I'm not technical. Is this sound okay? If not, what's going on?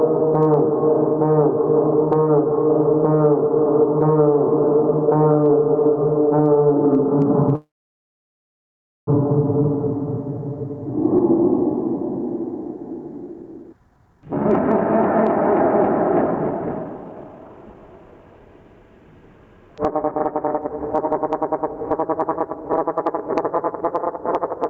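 No. Throughout the clip there is gain pumping: loud and soft parts end up much closer in level than they should be. This likely comes from the input level being set far too high, with an automatic limiter pulling it down hard every time something loud happens, so everything sounds squashed.

From 7.55 to 9.09 s there is a call audio freeze. The sound briefly trails on, then goes almost silent for about 1.4 seconds. This likely happened because data on the call was held up and the receiver ran out of audio to play. When it arrived, the sound carried on where it stopped, so nothing is lost, but everything after that point runs about 1.5 seconds late.

There are then two stretches of jitter buffer speed-up, where the receiver works off that built-up delay by cutting out many tiny slices of sound. From 13.28 to 14.85 s the audio plays at 142% speed, and from 15.36 to 18.81 s at 125%. The pitch stays the same, but those parts sound hurried, and roughly 1.7 seconds of delay is recovered in total.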